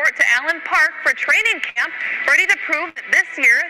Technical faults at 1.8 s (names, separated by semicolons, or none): burst of packet loss